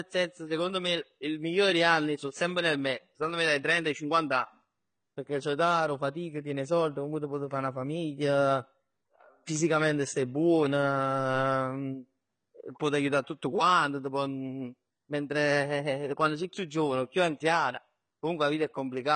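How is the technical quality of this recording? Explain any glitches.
The recording has two problems: lossy-codec damage throughout and one brief level jump.

The damage is likely from AAC compression, with AAC-LC working at a low bitrate that fits roughly 24 kbps. Nothing survives above 9 kHz, and the codec's coarse quantisation is plainly audible, leaving the speech dull and smeared, with warbling or fizzy textures.

From 4.44 to 4.65 s there is a sudden gain jump of about 5 dB. The digital gain steps instantly rather than ramping, likely from a setting applied without smoothing, so the speech and the background noise rise together.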